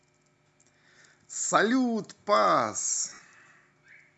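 A speech clip with plainly audible codec damage throughout: the upper spectrum sounds thinned and replaced by a grainy, breathy noise layer, giving the voice a rough, hissy edge. This is most likely Bluetooth LC3 compression, the LE Audio transform codec, which at a moderate rate drops upper-band detail and fills the gaps with noise. The texture fits a bitrate around 48 kbps with 10 ms frames. Between 3.09 and 3.21 s there are lost LE Audio frames. About 90 ms of audio is missing, scattered across a 120 ms stretch, which fits nine 10 ms frames. The longest single gap is about 50 ms. In each gap the decoder repeats the last spectrum with randomised phase, so the voice smears into a noisy wash.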